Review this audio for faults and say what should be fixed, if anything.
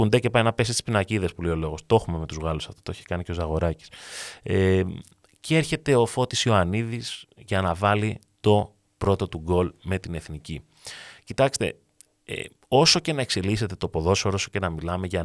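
No faults turn up on review, so nothing needs to be fixed.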